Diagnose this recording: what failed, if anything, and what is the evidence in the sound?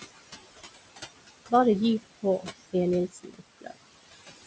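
Noise suppressor artifacts from call processing: room noise, about 12 dB under the speech, drops about 20 dB between phrases and returns beneath them, frame by frame.

Speech cut by the noise suppressor at 3.08–3.41 s and 3.58–3.87 s: speech misread as noise is pulled down about 16 dB and 21 dB, sounding swallowed.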